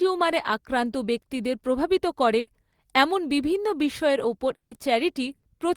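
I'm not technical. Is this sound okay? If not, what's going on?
No, there are a few brief glitches in the speech.

Two bursts of packet loss, at about 2.39 to 2.50 s (between "আক্রান্ত ব্যক্তিদের প্রভাবিত করে" and "এমন বিভিন্ন বিষয়ের ওপর") and 5.35 to 5.46 s. About 0.08 s drops out each time, briefly filled in by the last sound fading away.

At 4.55 to 4.74 s, just after "এমন বিভিন্ন বিষয়ের ওপর", the last sound stretches on and fades, then goes silent. That's likely a long network dropout, where the connection briefly stopped delivering audio.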